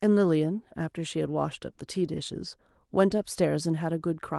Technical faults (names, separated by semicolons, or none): none